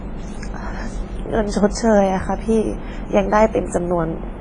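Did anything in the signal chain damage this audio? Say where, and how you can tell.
Yes. WMA compression damage runs through the whole speech clip, at the codec stage: the speech rings and sounds washy, with hiss pumping along with it, and nothing survives above 10.5 kHz. This is likely a long-block transform coder smearing quantisation noise, which fits a heavy squeeze near 24 kbps.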